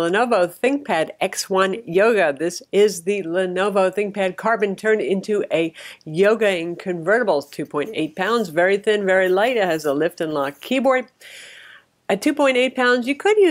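No technical faults can be heard anywhere in this clip. Nothing in the audio calls for comment from a technical point of view.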